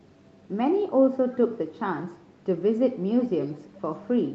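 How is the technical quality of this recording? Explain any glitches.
The recording has an echo leak in two places, heard against call audio that tops out at 8 kHz. The likely cause is the other end playing the call over a loudspeaker, with its echo canceller letting some of the microphone pickup slip back down the line. From 1.32 to 1.39 s a brief, very faint repeat appears, roughly 30 dB below the speech. From 3.21 to 3.81 s it returns much louder, around 15 dB down. Both times the copy trails the original by 348 ms.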